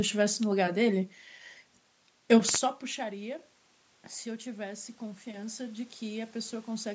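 From 4.24 to 6.9 s, automatic gain rising lifts speech and room noise by about 6 dB, the waveform envelope and noise floor climbing gradually.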